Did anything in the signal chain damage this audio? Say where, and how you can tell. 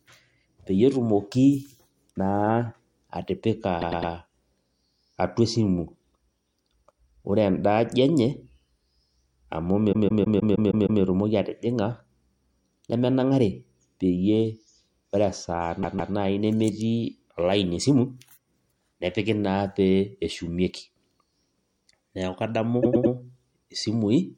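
Yes. Repeated frames at the codec or storage stage. The speech stutters at 3.80 to 4.12 s and 22.82 to 23.13 s, where a 104.5 ms block loops three extra times. At 9.92 to 11.01 s a 156.7 ms block plays seven extra times, and at 15.82 to 16.13 s it plays twice more. Unlike a buffer underrun or dropout, no audio goes missing: identical material replays, adding about 0.3 to 1.1 s per event.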